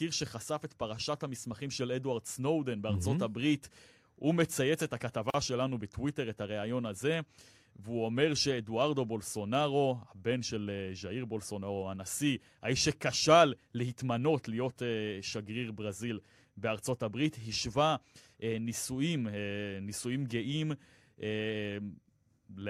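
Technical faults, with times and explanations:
5.30–5.34 s, gap at a join of encoded pieces: two separately encoded segments were spliced without trimming the encoder's start-up delay and final-frame padding, so a silence of about 41 ms cuts into the continuous speech, its edges smeared by the codec, before the sound resumes exactly where it stopped.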